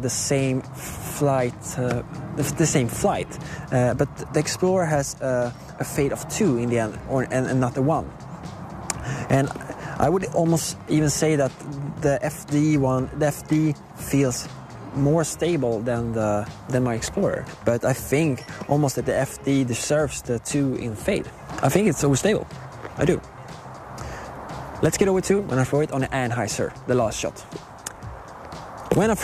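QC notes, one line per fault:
14.40 s and 22.55 s, compressed frames skipped: at each point about two whole frames of 23.2 ms go unplayed, so the audio jumps ahead by roughly 50 ms. Because adjacent frames overlap, the join is a short smeared blip rather than a hard click. On a waveform the envelope shifts abruptly with no sharp step; a spectrogram shows a thin vertical seam where partials break off and resume out of line.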